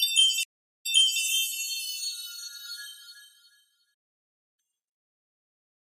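At 0.43 s the sound drops out for about 0.39 s, then resumes roughly 0.39 s earlier than where it stopped. This is a stream reconnect: the connection broke and a fresh decoder restarted from resent data.

From 3.94 s to 4.60 s the audio falls silent for about 0.64 s mid-flow. This playback stall is likely the player running out of data.

From 4.60 s to 5.24 s the sound runs at double speed, pitched nearly an octave higher. This is catch-up at higher speed, as the player resamples its backlog to recover lost time.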